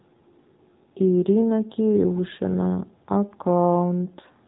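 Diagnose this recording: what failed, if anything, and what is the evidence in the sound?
Speech sounds buzzy and synthetic throughout, with nothing above 3.8 kHz: a codec fault, the AMR narrowband mobile codec, its thin pulse-driven model pointing to a bitrate near 7 kbps.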